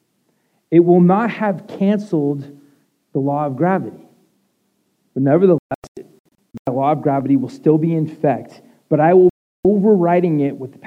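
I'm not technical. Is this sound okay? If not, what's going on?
No. A digital broadcast dropout hits from 5.58 to 6.68 s as a cluster of short silent holes, the longest about 0.13 s, and again from 9.30 to 9.65 s. The receiver lost clean signal and muted itself, so that sound is simply gone.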